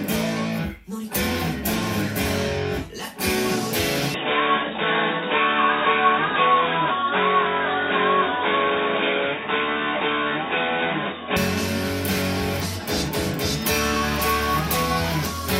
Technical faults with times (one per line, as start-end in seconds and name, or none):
4.14-11.37 input switched to a poorer device